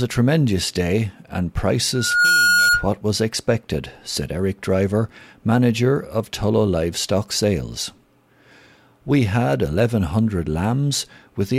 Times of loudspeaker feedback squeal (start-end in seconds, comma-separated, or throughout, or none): 1.93-2.88